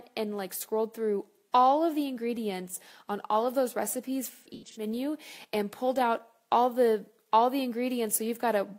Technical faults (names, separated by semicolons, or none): AAC frame loss with concealment